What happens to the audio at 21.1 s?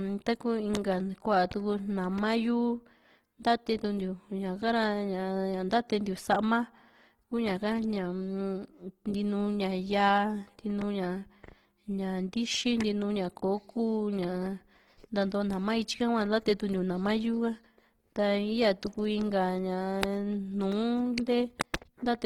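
At 21.1 s the speech sounds rough and grainy, as it does through the whole clip. That's Opus compression, likely in its CELT music mode at around 16 kbps. Starved bands get filled with folded or noise-like content, so the texture turns coarse.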